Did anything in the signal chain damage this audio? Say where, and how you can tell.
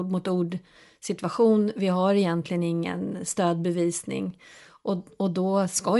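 Yes, at the codec stage, and it runs throughout the speech. The upper spectrum sounds breathy and grainy, with plainly audible damage that points to coarse 10 ms transform frames at a modest rate, on the order of 48 kbps. The likely cause is Bluetooth LC3 compression, which discards upper-band detail and substitutes shaped noise. On a spectrogram the high band would look mottled and speckled rather than cleanly harmonic, with block edges at regular 10 ms steps.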